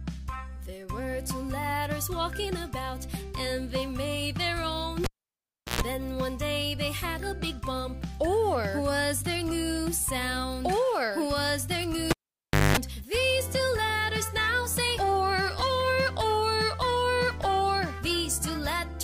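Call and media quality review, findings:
Cable pulled and plugged in, 5.04–5.81 s and 12.11–12.77 s. Pop, near silence (0.72 s, 0.62 s), then mains buzz (60 Hz for 0.12 s; 50 Hz for 0.21 s) while only the plug tip touches, then a second pop as the sound returns. The connection is being broken and remade under live signal.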